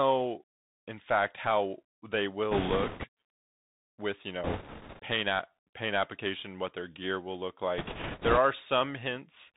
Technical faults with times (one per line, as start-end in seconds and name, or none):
0.00-9.56 Bluetooth CVSD headset codec
2.51-3.07 bit errors on a Bluetooth voice link
4.44-5.00 bit errors on a Bluetooth voice link
7.78-8.38 bit errors on a Bluetooth voice link